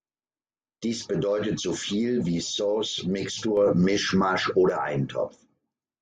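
At 3.57 s the level steps up by about 5 dB with no ramp. The speech and the background noise rise together. This is a sudden gain jump. The likely cause is a digital gain change applied between adjacent samples. The level stays raised until 4.70 s.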